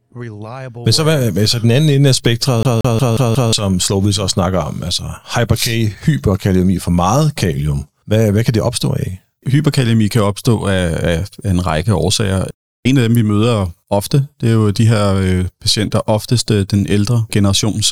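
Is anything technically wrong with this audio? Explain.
Yes. From 2.63 s to 3.53 s, just after "den anden ende af", the speech gets caught in a CD stuck on one turn. A scratch on the disc sends the laser back one track at the same point of each rotation, so a single 180 ms slice of audio repeats five times in a row. Each jump leaves a brief mute, producing the rapid, evenly spaced stutter typical of a skipping CD before playback moves on.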